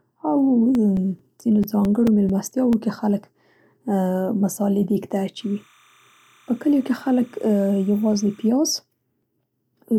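From 0.75 to 2.73 s, ending just before "کې خلک", CD scratch ticks sound as ten short ticks, the longest around 7 ms, about five per second. A blemish defeats error correction once per disc revolution, and the player patches the lost samples. That steady rotational spacing separates them from random vinyl-style clicks. Four more ticks, up to around 5 ms, return between 8.78 and 9.45 s.

From 5.40 to 8.48 s, after "مصالې دېګ ته", timecode bleed adds a chirping warble about 35 dB below the signal. Linear timecode leaks in as a square wave flipping between roughly 1 and 2 kHz, consistent with 30-frame code. Hum holds one pitch, but this hops between two.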